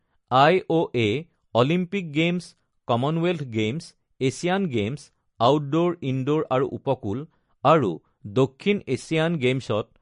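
Throughout the speech, the treble stops dead at 10.6 kHz and the sound turns watery and swirling, likely MP3 compression at a low bitrate; a plain low-pass filter would not swirl.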